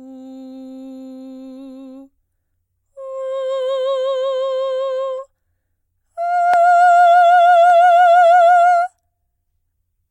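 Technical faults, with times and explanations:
5.18 s and 7.70 s, dropped samples: The stream likely lost a couple of samples at each point, so the waveform jumps straight to a later value. The gap is far too brief to remove any music, so each is heard only as one sharp click.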